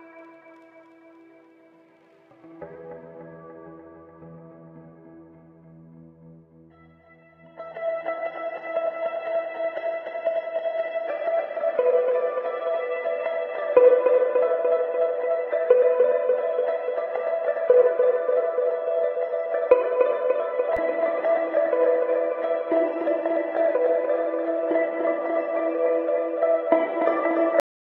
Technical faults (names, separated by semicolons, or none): cut-off end